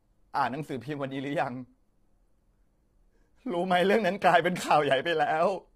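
From start to finish the speech carries low-delay AAC compression damage, and it is heavy. The voice sounds rough and grainy, with a hiss of noise filling the gaps between pitch harmonics and a top band that sounds dulled and partly synthetic. This is likely an AAC-ELD encoder: its short frames resolve harmonics coarsely and spend bits less efficiently, and the degree of damage fits a bitrate around 24 kbps.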